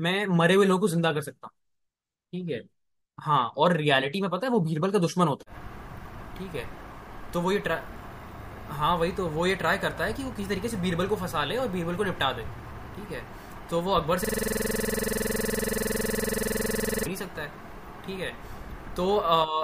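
It's a speech clip with a system hang loop from 14.25 to 17.06 s: one 46.44 ms slice repeats about 60 times at 21.5 Hz. The machine froze while playback kept cycling one buffer, which fits a 2048-sample buffer.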